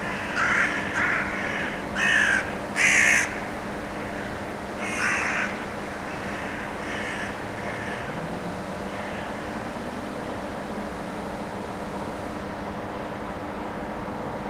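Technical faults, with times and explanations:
No technical faults are audible anywhere in these sounds.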